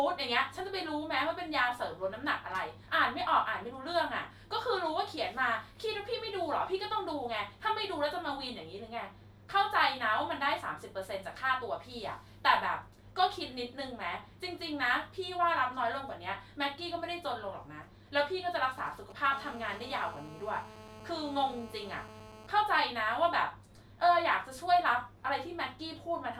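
At 18.63 s a nearby 2G phone starts making itself heard with GSM signalling bursts, running until 19.27 s. These are the short clusters of radio pulses a handset sends when it's sorting out a call or a text with the network. Something in the audio chain rectifies them, so you get a galloping dit-dit-dit of brief 217 Hz buzzes sitting roughly 20 dB under the speech.

Just after, at 19.33 s, it turns into full GSM phone buzz that holds until 22.47 s. The phone is now in a call and transmitting its bursts steadily at 217 Hz, and the rectified pulses come through as a hard, raspy tone packed with harmonics, about 18 dB below the speech. It has nothing to do with the speech underneath; it's just the radio leaking in.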